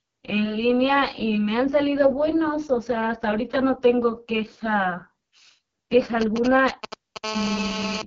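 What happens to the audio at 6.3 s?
At 6.3 s you're inside a stretch of GSM signalling bursts running from 6.21 to 7.17 s. A nearby 2G phone fires short groups of radio bursts, the audio circuitry rectifies them, and you get that galloping dit-dit-dit of short buzzes at about 217 Hz, almost as loud as the speech.

Underneath that, the whole clip is going through the AMR wideband (HD Voice) codec at one of its lowest rates, consistent with the 6.6 kbit/s mode. The speech sounds rough and raspy, and nothing comes through above about 7.5 kHz.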